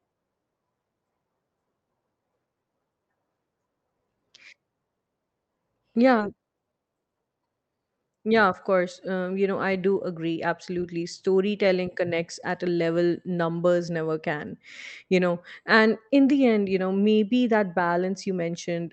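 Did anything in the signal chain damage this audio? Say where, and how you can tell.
Yes. A skip ahead at 6.19 s, in the network and jitter-buffer stage, is audible as an abrupt forward jump: around 0.7 s of speech is missing, with no fill or silence, and the two sides are butted together almost seamlessly. That points to a burst of packets lost in transit, or discarded when the buffer overflowed, while later audio was already queued, so playback simply resumed further on.

A jitter buffer speed-up follows from 6.35 to 7.98 s, in the same buffer stage. The speech runs at about 116% of normal rate, sounding hurried, yet its pitch stays unchanged, which rules out a clock or sample-rate error. The receiver was holding more audio than its target delay, so it repeatedly cut out short pitch-period-length pieces, roughly 0.3 s in total, to drain the backlog. This runs over the Opus call path, whose roughly 8 kHz bandwidth caps the highs.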